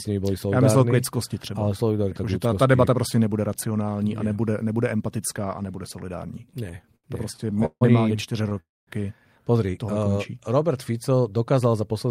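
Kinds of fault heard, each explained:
Repeated stalls (stutter): From 6.41 to 7.83 s, right after "nebude empatická a nebude", the speech drags and catches in 17 brief holds, the longest 156 ms. Packets kept arriving late, so the receiver repeatedly stretched the last sound, about 384 ms in all, with nothing lost.
Short stall from a late packet: At 8.49 s, shortly after "oni čtyři", one sound is held a touch too long with a slight buzz or dip. A single packet missed its slot, and the receiver extended the previous sound for 19 ms until it arrived, then carried on seamlessly.
Call audio freeze: From 8.60 to 8.89 s, still after "oni čtyři", the speech halts, trails off in a brief fading buzz or hiss and drops into about 220 ms of silence before resuming where it stopped. This is likely packets held up in transit emptying the buffer, with 272 ms bridged.
Jitter buffer speed-up: From 11.52 to 12.06 s the speech sounds rushed, running at about 109% speed with unchanged pitch. 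The buffer had built up extra delay, so the receiver trimmed many tiny pitch-period slices, about 50 ms overall, to catch up.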